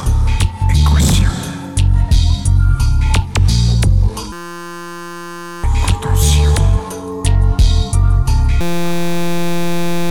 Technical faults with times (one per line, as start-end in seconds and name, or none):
4.32-5.64 system hang loop
8.61-10.11 system hang loop